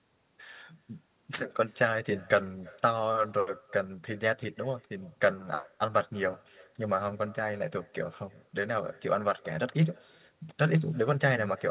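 With no echo canceller at the far end, the loudspeaker's output returns down the line, so the speech throughout is shadowed about a third of a second later by a faint copy, roughly 27 dB down.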